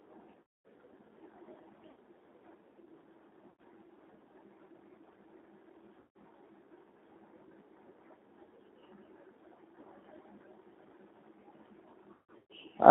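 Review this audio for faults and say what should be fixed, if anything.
The whole recording passes through a G.729 codec at 8 kbit/s, confining the speech to roughly 200 Hz to 3.7 kHz with a plainly audible rough, synthetic texture. Unlike simple low-pass filtering, the damage comes from pulse-based excitation rebuilding each 10 ms frame, so the graininess persists even within the narrow band. Moving the call to a wideband codec such as G.722 or Opus at a higher bitrate would prevent it.

VoIP packet loss concealed by the speech codec occurs at 0.41 s (240 ms lost), 1.91 s (60 ms), 3.50 s (90 ms), 6.00 s (150 ms), and 12.14 to 12.52 s, where 270 ms is lost across a 360 ms stretch with a longest run of 150 ms. In each gap the decoder stretches its last pitch and filter into a fading buzzy tone or coloured noise. This sets it apart from plain dropouts, which leave silence or clicks. Adding jitter buffering and forward error correction, or fixing the congested network path, would prevent it.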